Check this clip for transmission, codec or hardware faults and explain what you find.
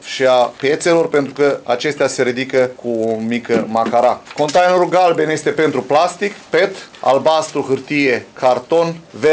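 A steady low buzz at 100 Hz runs through the whole clip, riding on the audio and vanishing whenever the signal drops away. This comes from a resampler restarted on every block. Each short chunk was converted on its own, which fits 10 ms blocks taken from 44.1 kHz down to 16 kHz. At every chunk edge the converter lacked the true neighbouring samples and left a small error. Those errors repeat a hundred times a second, so they merge into a buzz instead of separate ticks.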